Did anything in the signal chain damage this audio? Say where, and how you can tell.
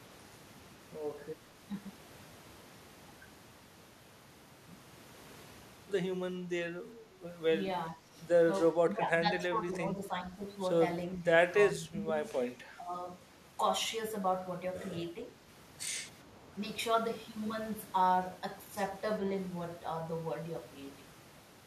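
Yes, it's in the call processing. The speech keeps dipping in short patches at 7.9–8.15, 8.86–9.28, 9.59–10.33, 11.15–11.26, 11.74–12.25 and 12.74–12.94 s. Most patches drop by a few dB, and the ones starting at 8.86 and 12.74 s go down around 10 dB. That's likely speech suppressed in double talk: both ends were talking, so the echo canceller couldn't tell this talker from the loudspeaker echo and ducked everything.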